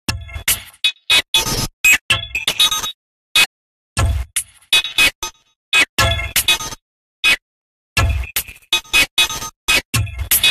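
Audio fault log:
3.44–3.46 s and 8.90–8.92 s, damaged data in a compressed stream: corrupted bytes in the encoded stream make the decoder misread frames, lose sync and hunt for the next frame header, so each spot gives a brief chirp or blip about 20 ms long.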